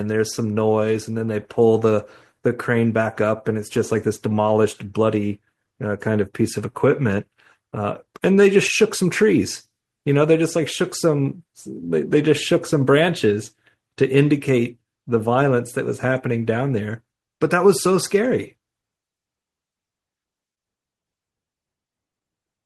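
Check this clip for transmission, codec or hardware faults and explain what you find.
Nothing here points to a transmission, codec or hardware problem; the speech comes through steady and intact all the way.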